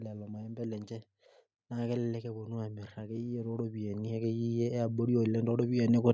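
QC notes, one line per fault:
0.95 to 6.09 s, automatic gain rising: the call's gain control judged the incoming level too low and kept lifting its gain, by about 13 dB in total, over roughly five seconds instead of settling. The speech and the background noise beneath it swell together, so the later part of the clip sounds steadily louder than the start. The microphone processing around it, with its bass roll-off and nothing above 8 kHz, still shapes the tone.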